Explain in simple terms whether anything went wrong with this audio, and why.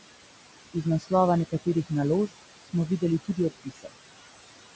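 Noise suppressor artifacts run through the whole recording. The suppressor treats the room's steady background noise as unwanted and strongly turns it down in each short slice of time. As a result, the background drops away in the gaps and comes back underneath the talking, so the leftover noise seems to breathe in and out rather than staying level. That pumping is the suppressor working hard on a noisy room.

Speech cut by the noise suppressor happens four times: 0.74 to 1.12 s, 1.5 to 1.91 s, 2.62 to 3.03 s, and 3.25 to 3.94 s. In each stretch the suppressor mistook part of the speech for background and turned it down along with the noise. Quiet sounds become faint or seem swallowed. The first three are brief, lasting around a tenth of a second or a bit more. The last is the longest, at close to half a second.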